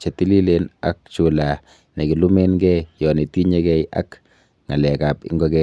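No technical faults are audible anywhere in the speech recording.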